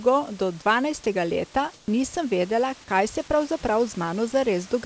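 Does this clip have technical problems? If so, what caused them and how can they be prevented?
Yes. From 1.74 to 1.88 s, the room background is replaced by steady, featureless comfort noise, about 2 dB quieter. This is likely discontinuous transmission during a speech pause. Disabling DTX on the sender prevents it.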